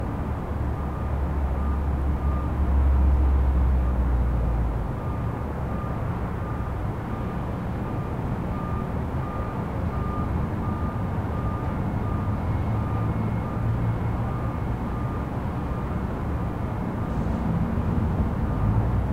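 No technical faults are audible anywhere in the recording.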